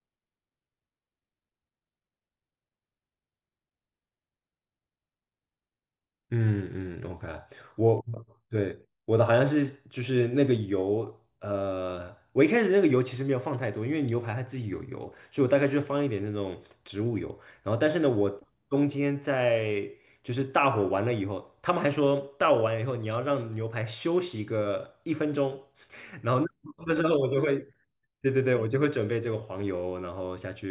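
A speech recording with no technical faults audible anywhere in the signal.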